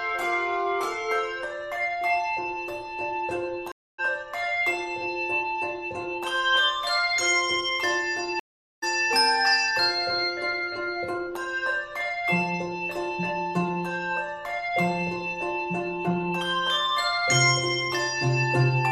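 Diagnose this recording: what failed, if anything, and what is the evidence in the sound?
Network stage: two stream reconnects. The audio drops out at 3.72 to 4.0 s (266 ms of silence) and 8.4 to 8.84 s (426 ms), then resumes a little further on, skipping roughly a fifth and roughly four tenths of a second. The connection broke and a fresh decoder picked up the live stream mid-flow.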